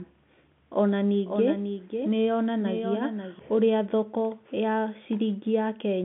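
From 0.97 s to 3.39 s the speech is doubled: a second, full-band copy runs roughly half a second behind the original and about 5 dB quieter, so each phrase is answered by a dry repeat with no reverberant tail or room colouring. It switches on and off abruptly at those times. This doubled audio track is likely the same signal being picked up again through a slower path. The telephone-band G.711 coding is audible throughout.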